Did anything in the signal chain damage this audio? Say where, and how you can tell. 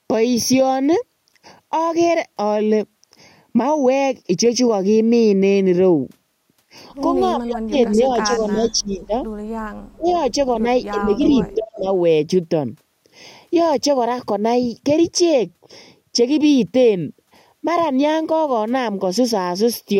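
Yes. Channel delay (comb filtering) runs through the whole clip. One channel lags the other by roughly 0.4 ms, and summing them to mono cuts regularly spaced notches starting near 1.5 kHz. The result is a hollow, phasey tone that points to the wiring or mono downmix stage.

Speech suppressed in double talk appears at 7.35–9.13 s, 9.7–10.1 s, 10.62–11.22 s and 11.55–11.86 s. The sound dips by up to about 30 dB, losing its top end or dropping out in pieces. This is likely the call processing's echo canceller ducking the near talker while the far side speaks.

Echo leak occurs at 7.8–8.71 s, 10.07–10.33 s and 11.24–11.54 s. A delayed copy follows the original by 317 to 333 ms, sitting about 15 to 25 dB below it. The likely cause is the far end's loudspeaker echo slipping past its canceller in the call processing stage.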